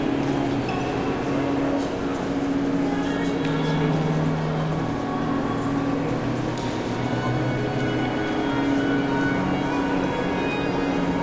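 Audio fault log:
No faults can be heard anywhere in this audio.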